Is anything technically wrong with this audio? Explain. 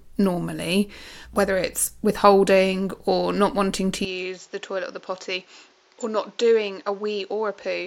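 Yes. From 4.05 s to the end, just after "or not wanting to", the input was likely switched to a poorer device. Its narrower band cuts everything above 7.4 kHz, so the sound turns dull, drops roughly 10 dB, and gains a new noise floor about 30 dB down, with no gap at the switch.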